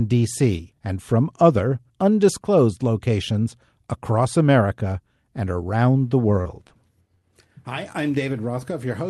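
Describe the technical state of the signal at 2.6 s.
At 2.6 s the speech signal is intact, with no dropout, glitch or other fault.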